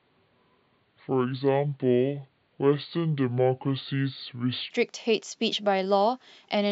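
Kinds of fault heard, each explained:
Section at the wrong speed: From the start to 4.70 s, the speech runs at 0.61 times its recorded speed. Pitch falls by roughly ten semitones, so it sounds deep and slow. The likely cause is a mismatched playback clock. At 4.70 s, pace and pitch jump up.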